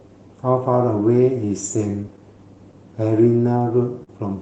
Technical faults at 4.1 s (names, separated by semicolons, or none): clock drift between sender and receiver; short stall from a late packet